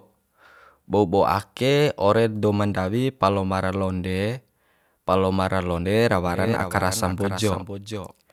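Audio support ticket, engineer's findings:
Doubled audio track, 6.27 s to end: full-band copy half a second late, about 10 dB down; waveform: abrupt, undecayed echo. Likely duplicate capture path.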